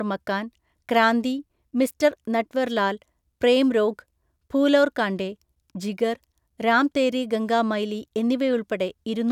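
No technical faults can be heard anywhere in this recording.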